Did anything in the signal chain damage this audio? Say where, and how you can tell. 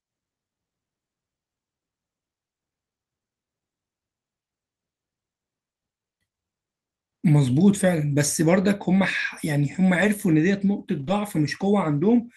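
Yes, at the network stage: there are two spots where a lost packet was rebuilt from error correction. The first is at 10.01–10.03 s and the second at 10.99–11.09 s. Neither leaves a gap. Instead you hear a brief rougher, noisier patch, 20 ms and then about 60 ms long, which fits one and then three Opus packets. The decoder filled each with the low-bitrate backup copy carried in the following packet, so the audio continues but at reduced quality.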